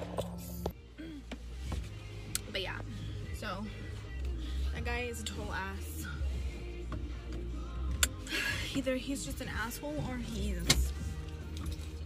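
Listening through the recording, nothing stood out as a technical problem at any point.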